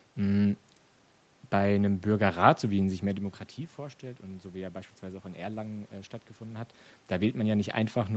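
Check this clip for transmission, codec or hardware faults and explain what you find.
Nothing stood out on listening to this speech clip.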